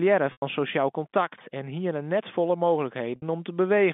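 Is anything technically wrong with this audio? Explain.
Yes, there's packet loss with pitch repetition, twice: 0.32 to 0.42 s, just before "sosjaal kontakt en hiene," and 3.16 to 3.22 s. The receiver loops the last pitch period and fades it out, so you hear a brief buzzy hold dying into a gap before speech cross-fades back in.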